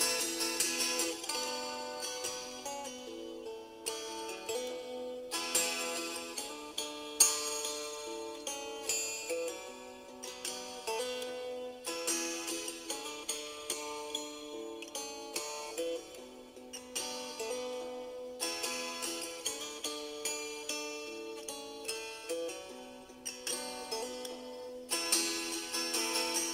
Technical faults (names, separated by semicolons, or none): crude rate conversion